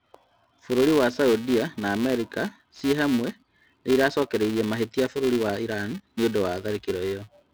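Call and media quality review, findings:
Filter restarted on every block: tick-buzz near 345 Hz throughout, tracking speech level. Filter state reset per block, fits a 128-sample block.

Pre-emphasis left on, 4.83 to 6.83 s: thin, sibilant treble, about 8 dB up at 10 kHz relative to 1 kHz. Missing de-emphasis, consistent with a CD 50/15 µs curve.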